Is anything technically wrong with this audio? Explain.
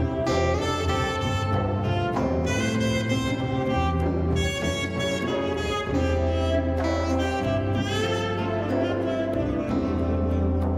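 No, no technical faults here.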